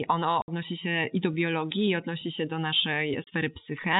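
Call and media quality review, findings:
Packet loss filled with silence. Speech drops out at 0.42–0.48 s, just before "się i do biologii", and again at 3.24–3.27 s. Gaps of 60 ms and 30 ms, hard-edged. Fits whole 30 ms packets lost in transport, zeroed by receiver. G.711 telephone band intact.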